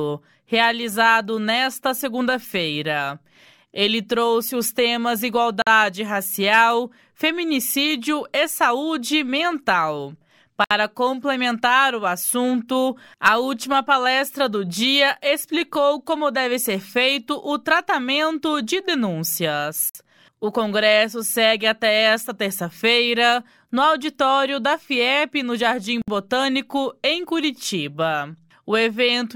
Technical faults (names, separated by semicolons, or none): gap at a join of encoded pieces